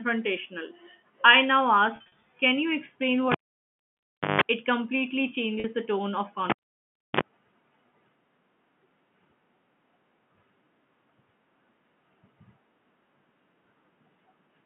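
Between "I now" and "can you explain", from 1.96 to 2.12 s, packet loss with pitch repetition hides about 120 ms of dropouts scattered over 160 ms, none longer than 40 ms. Each gap is filled by looping the last pitch period, so the sound briefly holds on a buzzy tone. On a spectrogram this appears as short, flat harmonic stripes, and the waveform shows identical cycles repeating.

At 3.32 s a cable pulled and plugged in produces a sharp pop, visible as a vertical broadband line. About 1.05 s of near-flat trace follows, containing a 160 ms burst of 50 Hz mains buzz that shows as low horizontal stripes. A second pop arrives at 4.41 s.

Further concealed losses fall at 3.62 s (60 ms) and at 5.60 s (40 ms), the latter just before "the tone of". Each shows the same brief held tone.

After "the tone of", a second unplugging runs from 6.50 to 7.21 s, framed by two pops. It leaves about 0.66 s of silence with only 41 ms of buzz, within a telephone band of roughly 150 Hz to 3.4 kHz.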